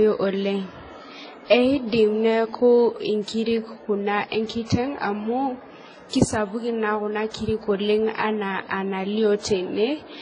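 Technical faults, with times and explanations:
Throughout, transcoding between lossy codecs: the speech was likely encoded at a very low bitrate with an HE-AAC-type codec and then re-encoded with a WMA-type codec. The second encoder spends its bits reproducing the first one's damage and adds its own, so two kinds of smearing and swirling artefacts are layered together. Nothing survives above about 10.1 kHz, which leaves the speech dull and lacking air.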